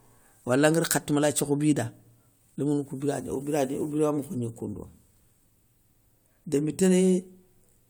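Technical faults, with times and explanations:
No technical faults can be heard in this speech recording; the signal stays continuous.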